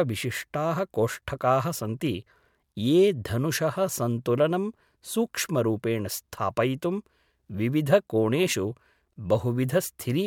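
Nothing in the speech stood out as a technical problem on listening.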